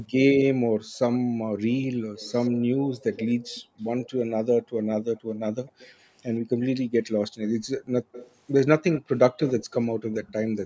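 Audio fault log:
0.62–4.75 s, 7.80–7.92 s, 9.90–10.12 s: background gated by the echo canceller. While the loudspeaker played, the canceller clamped the microphone, pulling room sound down by about 40 dB at worst (about 24 dB at 7.8 s). On a spectrogram the noise floor vanishes in short vertical gaps, about a second in all during the first span.
0.95–6.10 s and 7.42–9.74 s: echo leak. A faint copy of the speech trails it by 121 ms, roughly 15 dB down, likely loudspeaker pickup the far end's canceller failed to remove. The spectrogram shows ghost harmonics repeating the speech slightly later; the waveform shows small smeared tails.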